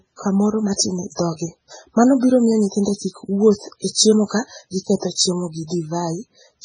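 MP3 compression runs throughout the speech, likely from a very low-bitrate encode, around 16 kbps. Nothing is left above 9.5 kHz, and weak frequency lines drop in and out between frames, so the heavily damaged sound turns watery and swirly, with metallic chirps on s sounds and smeared attacks.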